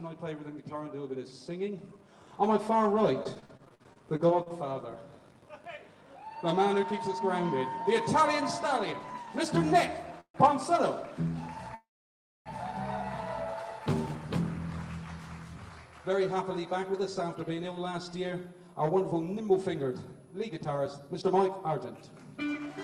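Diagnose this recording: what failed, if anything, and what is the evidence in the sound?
Network stage, repeated packet loss (robotic sound) from 3.23 to 4.52 s: fifteen short holes, the longest 49 ms, patched by extending the preceding sound, which turns it choppy. On a spectrogram this shows as repeated smeared, frozen-looking slices, with 220 ms of real audio missing.

Call processing, filter restarted on every block from 5.10 to 6.36 s: a filter resets its state at each block boundary, so every block opens with a small click. These merge into a 50 Hz buzz, which fits 20 ms blocks. The spectrogram shows evenly spaced vertical lines and the waveform shows ticks that rise and fall with the level.

Jitter buffer speed-up at 6.72 to 7.21 s (about 108 %, a few tens of milliseconds removed) and 15.62 to 22.67 s (110 %, well over half a second cut): the buffer trims pitch-period pieces to shed excess delay. 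Pitch stays the same while timing hurries. The waveform shows slightly compressed, regular spacing.

Call audio freeze at 10.20 to 10.51 s and 11.75 to 12.48 s: the sound stalls into a fading buzz, then about 90 ms and 630 ms of silence, and resumes where it stopped. Nothing is lost, but the delay grows. The likely cause is delayed packets emptying the jitter buffer. A spectrogram shows smeared tails followed by blank stretches.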